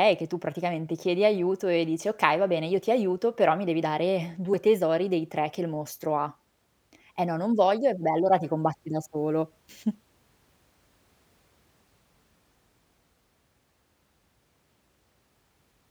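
From 9.18 to 11.17 s, after "allora ti combatti da", sample clock jitter adds roughness. Timing wobbles around two microseconds. The hiss sits roughly 45 dB down, strongest on bright consonants.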